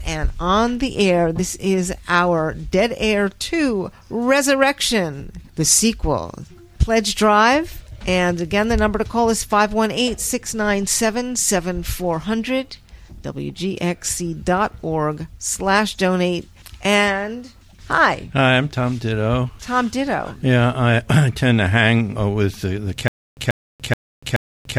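At 0.73 s a DC step shifts the waveform's zero line abruptly, heard as a low thump while the sound carries on unchanged. The offset then fades away, which fits a high-pass around 5 Hz pulling it back. From 23.08 s to the end there is a stutter with silent gaps. A 138 ms burst repeats four times, each followed by about 290 ms of digital silence, a cycle of 428 ms. The likely cause is a stalled player or stream replaying its last fragment on each retry. The audio meant for that stretch is lost.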